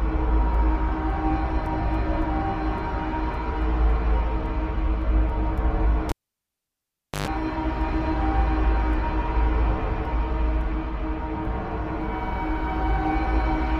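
A live cable is pulled and plugged in again at 6.09 s. A pop cuts the sound to near silence for about 1.13 s. Then a 50 Hz mains buzz lasts about 0.11 s as the plug tip touches. A second pop brings the audio back at 7.28 s.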